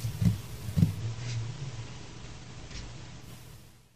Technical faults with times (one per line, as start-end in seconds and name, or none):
0.92-3.30 digital radio blending to analogue